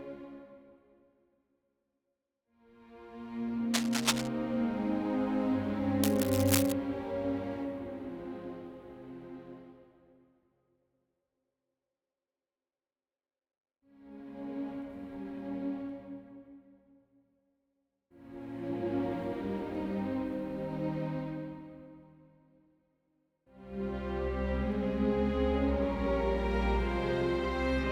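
Cable scratch noise appears from 3.74 to 4.28 s and again from 6.03 to 6.72 s: short, dense bursts of ragged scratching and rustling laid over the sound. The first burst sits about level with the audio and the second a little below it. The likely cause is a worn cable, connector or control being moved, so that its contact resistance jumps about rapidly and injects irregular noise into the signal path.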